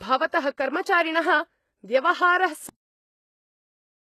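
From the start the speech has a thin, gritty top end, with s sounds going metallic and lispy and nothing above about 12.3 kHz. That's likely HE-AAC compression at a low bitrate, roughly 16 kbps, with the treble rebuilt from copied lower bands that don't quite match.

Then at 2.69 s there's a cut-off end: the audio stops dead mid-sound and drops straight to digital silence with no decay. The final buffers never made it out, so the silence runs on to the end of the clip.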